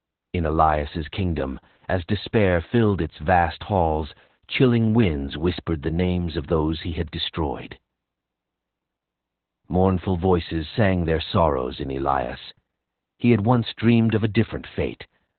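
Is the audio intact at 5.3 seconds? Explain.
No. At 5.3 seconds, as throughout the clip, the speech carries Opus voice compression in narrowband SILK mode, consistent with roughly 8 kbps. Coarse linear-prediction coding makes it muffled, hoarse and slightly robotic. A spectrogram shows nothing above about 4.3 kHz.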